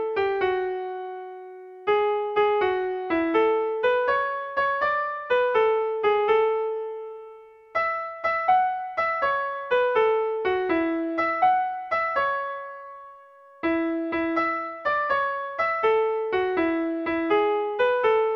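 Nothing here catches the ear as a technical fault; the audio just runs along without any glitch, dropout or disturbance worth pointing to.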